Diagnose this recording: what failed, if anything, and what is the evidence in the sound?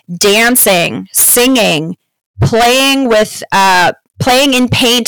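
Harsh, buzzy fuzz sits on the speech from start to finish, on every loud syllable rather than just occasional peaks. This is hard clipping. The signal was driven about 20 dB past the converter or sample-format limit, so roughly a third of the samples were cut off, flattening waveform tops into dense high harmonics.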